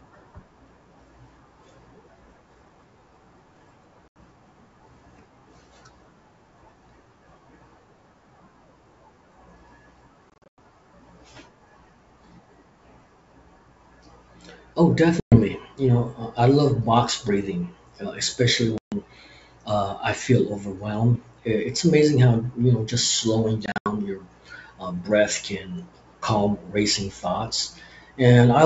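Packet loss on an ADPCM call hits at 4.08, 10.30 to 10.59 (scattered gaps), 15.20, 18.78 just after "box breathing uh especially", and 23.66 before "your uh breath can". Each hard-edged silent hole leaves the decoder's predictor out of step, so speech returns slightly distorted.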